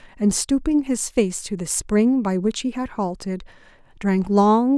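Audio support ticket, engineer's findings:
Checked the speech recording end to end and nothing stood out, so no faults to log on this one.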